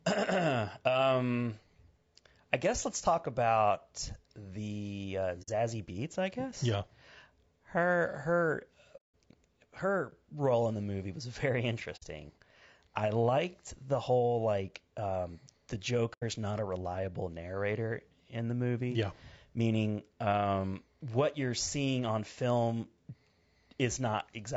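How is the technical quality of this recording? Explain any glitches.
The recording has plainly audible coding damage throughout and four short dropouts.

Throughout, a low-bitrate, low-delay encoder, likely AAC-ELD at around 32 kbps, leaves the speech rough and grainy. Its short frames resolve pitch harmonics poorly, so noise fills the gaps between them and the top band sounds dull or synthetic.

AAC frame loss with muting occurs at 5.42–5.49 s, just after "talk about the uh", at 8.96–9.13 s, at 11.96–12.04 s, and at 16.13–16.23 s, just before "is not a reliable". The decoder zeroes the missing frames' spectrum, and the overlapping windows fade the sound out and back in, leaving soft-edged holes of about 60 to 180 ms.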